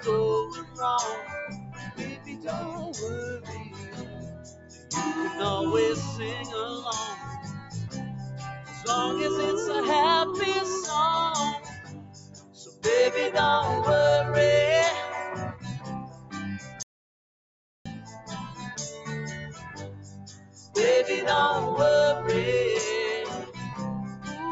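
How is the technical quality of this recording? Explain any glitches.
Technical quality is poor: the level pumps and thins throughout, several stretches sink noticeably, and one passage drops into dead silence.

Across the whole recording, held and fading sound swells and collapses by roughly 15 dB while sharp onsets come through intact. A noise suppressor applied to music or sounds, tuned for speech, is treating steady tone, ambience and tails as noise and turning them down.

Sound cut by the noise suppressor is clearest at 0.63–0.79 s, 1.51–2.44 s, 3.38–4.90 s, 7.46–7.75 s, 8.54–8.85 s, 11.59–12.84 s, 15.53–18.65 s and 19.35–20.75 s. Sustained material sinks by up to about 11 dB, and decays are clipped short, because the suppressor classified these parts as noise.

From 16.83 to 17.86 s the audio drops out to silence for about 1.03 s, with no room tone at all, and then resumes mid-flow. 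This audio dropout to silence most likely comes from the input being lost while the recorder kept writing zeros. The content in that gap is gone.

The band stops at 8 kHz, consistent with call microphone processing.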